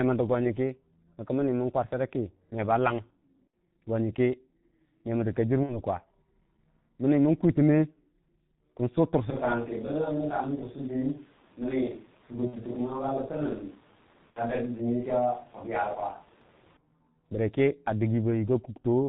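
The whole recording passed through the G.723.1 codec at about 6.3 kbit/s, and the compression is heavy. This low-rate telephony coder discards everything above 4 kHz and refreshes its model of the vocal tract only once per 30 ms frame. The speech therefore sounds muffled and rasping throughout, and consonants smear into one another instead of landing crisply.

At 3.47 s and again at 5.64 s, packets were lost in transit and the decoder filled the gaps by extending its last pitch and filter settings with falling gain. Each gap lasts about 60 ms, which fits two missing 30 ms frames. The result is a brief stretch of buzzy tone or coloured noise that fades, from 3.47 to 3.54 s and from 5.64 to 5.80 s. The sound stays thin for a moment after each one.

From 9.30 s to 16.77 s, the close microphone likely dropped out and a more distant one took over. The level falls by roughly 5 dB, the voice becomes hollow and roomy with less low end, and background noise rises to around 30 dB below the speech. 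Both the change at 9.30 s and the return at 16.77 s are abrupt.

Within that stretch there are two more packet-loss concealment events, each again about 60 ms of lost audio. The first runs from 12.47 to 12.56 s and the second from 14.30 to 14.44 s. Both produce the same fading concealment sound, now heard over the distant pickup.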